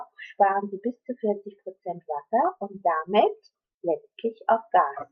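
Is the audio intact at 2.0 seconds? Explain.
Yes, the audio is intact at 2.0 seconds, with no fault audible at that moment.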